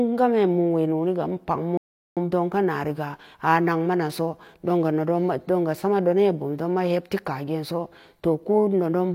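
At 1.77 s the speech just cuts out and stays silent until 2.17 s, about 0.39 s of dead air, then carries on. That's a playback stall: the player likely ran dry of data or had its thread blocked, so output went quiet until it recovered.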